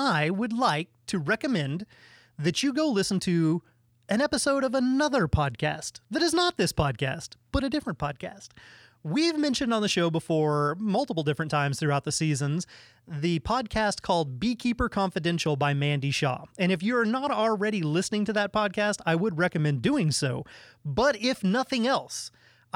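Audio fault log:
No fault is heard anywhere in this speech recording.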